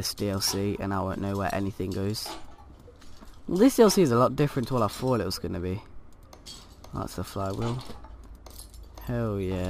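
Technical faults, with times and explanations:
No technical faults detected anywhere in the audio.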